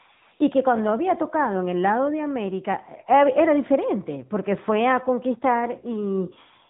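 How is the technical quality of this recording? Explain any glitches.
The recording is clearly degraded by AMR narrowband mobile codec damage throughout. The speech sounds thin, buzzy and synthetic, with nothing above 3.8 kHz, because AMR-NB samples at 8 kHz and rebuilds speech from a coarse vocal-tract model, consistent with a mid-rate mode around 10 kbps.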